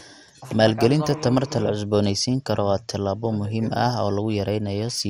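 Throughout the speech, nothing remains above 15.8 kHz and a gurgling, granular distortion is plainly audible, likely MP2 compression with sub-bands starved of bits, consistent with about 64 kbps.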